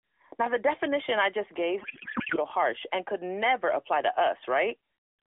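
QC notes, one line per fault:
1.82–2.38 s, codec payload misread: the decoder unpacks the AMR frames with every field shifted, which points to octet-aligned frames read as bandwidth-efficient. After "definition I just gave" the speech becomes garbled, warbling noise that barely follows it, until "harsh and could never".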